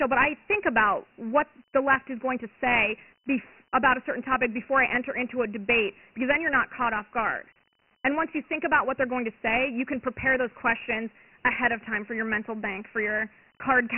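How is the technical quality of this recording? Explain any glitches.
The technical quality is poor, because of one fault that runs through the whole speech clip: Dialogic VOX ADPCM coding. Nothing survives above about 2.9 kHz, which points to 4-bit samples taken 6,000 times a second, roughly 24 kbps. Each sample stores only a small step from a running prediction, at 12-bit precision. That coarse stepping leaves heavy damage. A gritty hiss clings to the speech, and the dull, boxed-in band sounds like an old phone menu.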